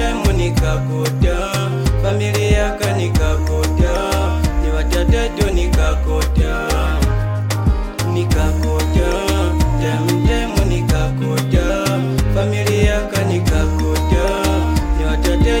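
Nothing stood out on listening to this recording; no technical fault could be heard at any point.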